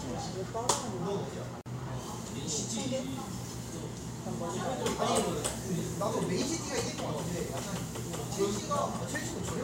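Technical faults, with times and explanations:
1.61 to 1.66 s, gap at a join of encoded pieces: separately encoded segments were spliced untrimmed, leaving a 48 ms gap with smeared edges before the sound resumes.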